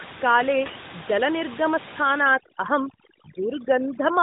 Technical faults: overdone noise removal

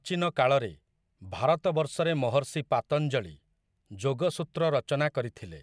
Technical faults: none

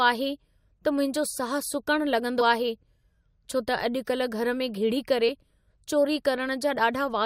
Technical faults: compressed frames skipped

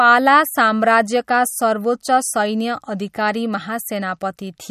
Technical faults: MP3 compression

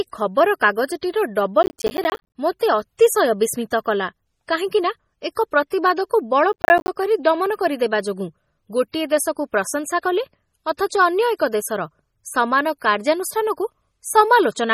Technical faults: MP3 compression; processor overload crackle; pre-echo

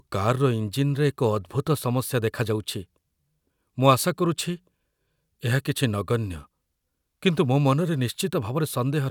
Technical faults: none

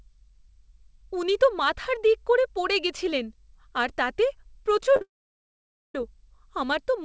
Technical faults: short concealed packet loss; long network dropout

